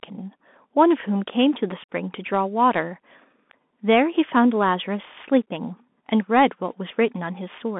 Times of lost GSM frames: none

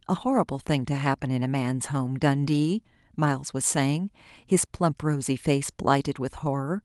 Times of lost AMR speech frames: none

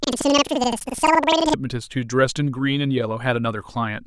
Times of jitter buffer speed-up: none

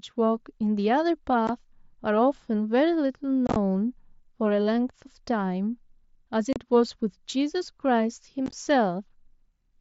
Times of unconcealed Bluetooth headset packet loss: 1.47, 3.47-3.56, 6.53-6.56, 8.46-8.53

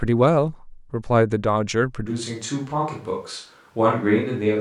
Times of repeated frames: none

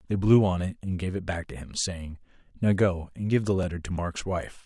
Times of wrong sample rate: none

